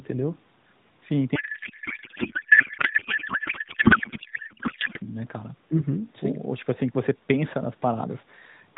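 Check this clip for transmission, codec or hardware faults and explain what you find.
A codec payload misread runs from 1.36 to 4.99 s. The speech there is replaced by garbled noise and warble that barely tracks it. The sender packs AMR frames in octet-aligned form, and the receiver reads them as bandwidth-efficient, so every field sits at the wrong bit offset and the decoder builds nonsense excitation and filter values. On a spectrogram the harmonic striations vanish into smeared, swirling energy below 4 kHz. The waveform envelope stops following the syllables. Around this stretch the AMR narrowband path itself sounds lightly band-limited, consistent with roughly 12.2 kbps.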